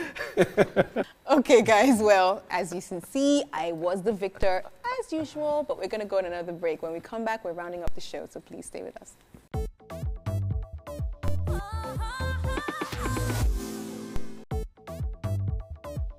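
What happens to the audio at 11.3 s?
At 11.28 s there is a DC step. The waveform's zero line jumps suddenly to an offset of about -19 dBFS. It is the kind of shift a converter recalibrating or an offset input being switched in would cause. The jump is heard as a single low thump or click. The sound itself carries on unchanged. The offset does not hold. It drains away, as a 2 Hz high-pass would pull it back to zero.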